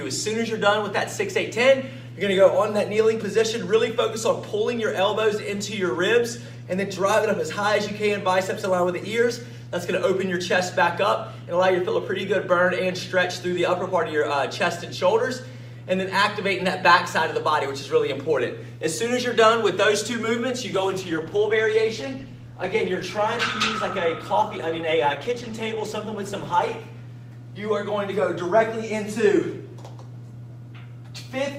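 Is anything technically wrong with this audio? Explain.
Yes. From 20.7 to 26.7 s the adaptive stream drops to a lower bitrate: with no gap, the sound suddenly turns swirly with codec artefacts for six seconds, which fits a switch from 64 to 16 kbit/s Opus. Unlike a dropout, nothing goes silent, and full quality returns abruptly.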